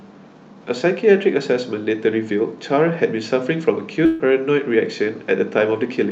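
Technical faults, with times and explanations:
4.05 to 4.21 s, burst of packet loss: about 140 ms of speech was lost, so the receiver extended the last sound into a fading buzz or hiss, then jumped ahead. The spectrogram shows smeared, flat bands dying away; the waveform shows a decaying repetitive stretch, then an abrupt restart.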